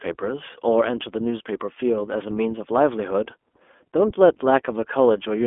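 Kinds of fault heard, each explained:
iLBC codec, throughout: The speech is confined to a telephone band of roughly 250 Hz to 3.4 kHz and coded in independent 20 ms frames. This leaves a plainly audible rough, slightly synthetic edge, consistent with the 15.2 kbps iLBC mode.
Lost iLBC frames, 3.52 to 3.54 s: A 20 ms stretch, about one frame's worth, goes missing. The decoder bridges it by repeating the last pitch cycle blended with noise, heard as a brief buzzy hold. Because each frame decodes independently, the speech recovers immediately afterwards.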